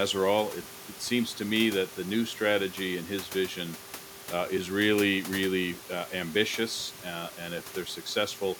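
Throughout the speech, overdone noise removal suppresses individual frequency bands near the estimated noise floor, leaving twinkling specks in near-silent gaps; the room noise sits about 19 dB below.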